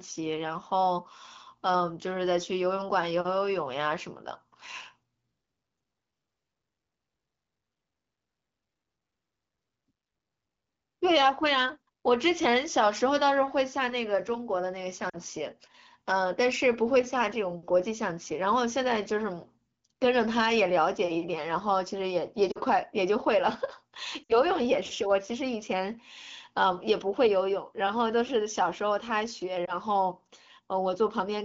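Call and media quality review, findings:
Lost AMR speech frames: radio errors failing frame checksums, decoder concealing with the last good pitch and vocal tract settings at falling gain. Brief dips at 15.09–15.17, 22.51–22.58, 24.24–24.37 and 29.65–29.77 s. The longest fits three 20 ms frames, with weak recovery.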